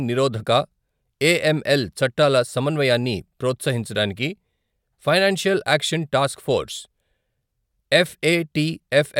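A short recording of speech, with no technical faults to report. Nothing in it needs a time or a cause attached.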